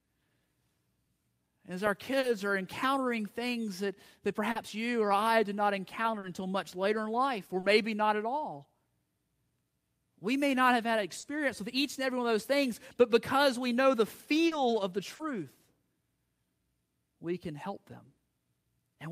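Short concealed packet loss occurs seven times, at 2.19 s (just before "are encountering things that"), 4.51 s, 6.19 s, 7.59 s, 11.19 s, 14.47 s (between "because we know the" and "of the") and 15.15 s (right after "of the"). Each time about 40 ms of the speech arrived too late for the decoder, which filled it by extending the preceding sound and then blending back, leaving a brief smear or wobble of roughly 70 ms.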